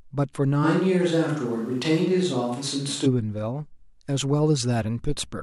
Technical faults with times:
0.65-3.05 switch to a distant microphone

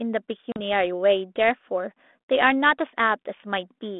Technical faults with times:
0.52-0.59 packet loss on an ADPCM call

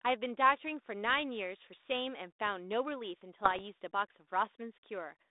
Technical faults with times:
3.44-3.61 bit errors on an ADPCM link

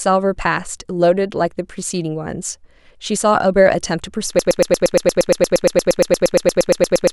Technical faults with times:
4.39-7.12 broken-record loop

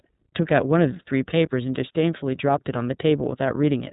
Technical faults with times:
0.00-3.93 iLBC codec

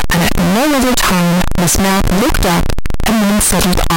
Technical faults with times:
0.00-3.96 float read as integer

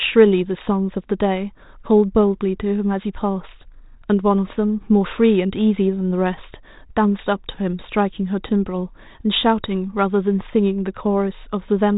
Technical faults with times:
none

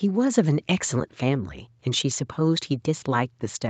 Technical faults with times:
none

